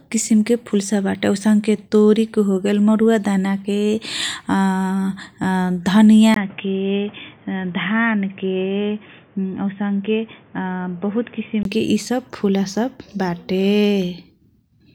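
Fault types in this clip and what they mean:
Input switched to a poorer device: likely cause of the dull, boxy speech from 6.34 to 11.65 s. Nothing above 3.5 kHz, about 5 dB quieter, faint added noise.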